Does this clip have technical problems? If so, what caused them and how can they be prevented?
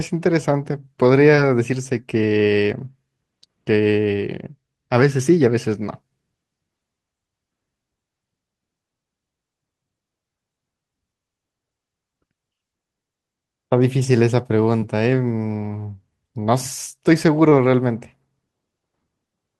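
Yes. Short concealed packet loss occurs three times, at 1.35, 14.79 and 17.49 s. Each time about 20 ms of speech arrived too late for the decoder, which extended the preceding sound to fill the gap, heard as a brief smear or wobble. A larger jitter buffer or forward error correction would prevent it.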